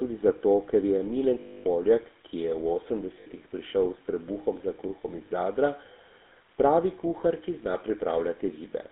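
Throughout the speech, the GSM full-rate codec adds a buzzy, gravelly roughness, consistent with a 13 kbps stream. Pulse-driven vocal-tract modelling thins the excitation, and the band is confined to 300 Hz–3.6 kHz. On a spectrogram, nothing appears above 3.6 kHz, with a hard ceiling across the clip.

Lost GSM frames occur at 1.40–1.64 s after "tudi zato ker je", at 3.20–3.27 s between "ki je v" and "prišel s trebuhom za", and briefly at 5.26 s after "trebuhom za kruhom iz". The decoder repeats the last good frame's settings, producing a held metallic ring. The spectrogram shows frozen, smeared horizontal bands, and the waveform shows a repetitive envelope.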